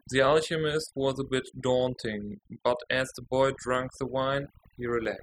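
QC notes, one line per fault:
Throughout, overdone noise removal: the background drops, broken by twinkling specks, and softer parts of the speech are cut away with the noise. On a spectrogram, the floor is scattered with isolated blobs flickering on and off, and the harmonics look gappy.
1.14 to 5.05 s, clock drift buffer slips: a regular click recurs every 1.31 s, about four in all. The likely cause is two devices on slightly mismatched clocks, roughly 150 ppm apart, so a few samples get dropped or repeated at each slip. The waveform shows small discontinuities, with thin vertical lines on the spectrogram.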